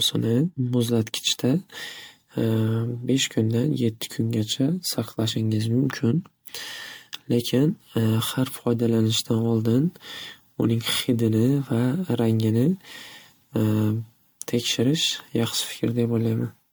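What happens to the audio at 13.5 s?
At 13.5 s the speech carries generation loss that runs through the whole clip, likely from MP3 encoding repeated around seven times near 98 kbit/s, each pass quantising anew. The errors stack up, so the sound turns swirly, smeared and hollow, with blurred attacks.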